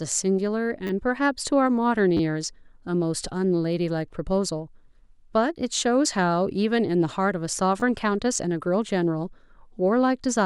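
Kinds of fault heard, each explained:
Repeated buffer: New audio arrived late, so the last short piece was played again. It happens at 0.87, 2.17 and 7.8 seconds. Each repeat is tiny, which fits a 10 ms buffer. So the hard joins sound like brief clicks or a short buzz rather than a clear stutter.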